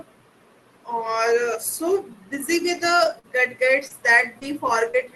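Scattered short gaps run from 3.03 to 4.95 s, starting just after "so busy with". Over that stretch, around five small pieces of the audio went missing or arrived too late, the longest about 40 ms. The receiver covered each hole by stretching out the sound that came just before it, patching roughly 7 percent of the span. The audio stays clear, but brief ticks, smears and hiccups break through at those points, over the coding noise of the call path.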